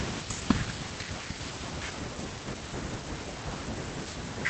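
At 1.99 s the speech lurches forward with no gap, as if a piece were cut out and the two edges butted together. This is a skip ahead: roughly 0.7 s of audio was dropped while later audio was already queued, so playback jumped straight on.

From 2.10 to 3.12 s the speech sounds rushed, running at about 112% speed while the pitch stays put. This is a jitter buffer speed-up: with too much audio backed up, the receiver trimmed short pitch-period slices repeatedly, shedding about 150 ms to cut the delay.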